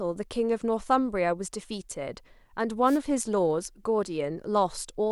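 A speech recording with one wireless microphone noise hit from 2.85 to 2.99 s: a brief burst of static lasting about 0.13 s. The analogue FM radio link faded as reflected signals cancelled, letting receiver noise rise over the speech until the signal recovered.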